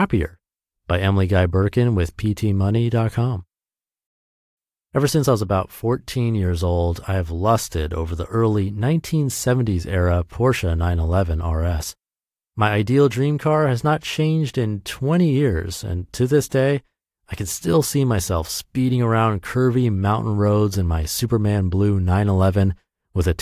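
No technical faults are audible anywhere in this speech.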